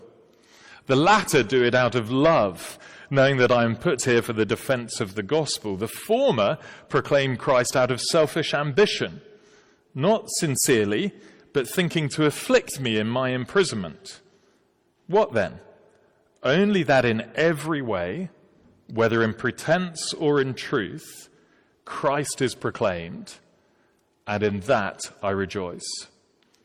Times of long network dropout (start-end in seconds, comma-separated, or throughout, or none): none